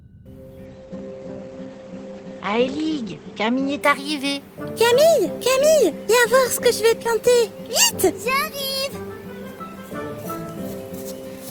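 From 0.66 to 3.87 s a call bitrate drop starves the encoder, consistent with about 12 kbps; the sound turns coarse and muffled, losing everything above 8 kHz.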